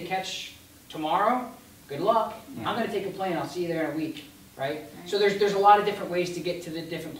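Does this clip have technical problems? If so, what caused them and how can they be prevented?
No, this clip has no technical problems, so there is nothing to prevent.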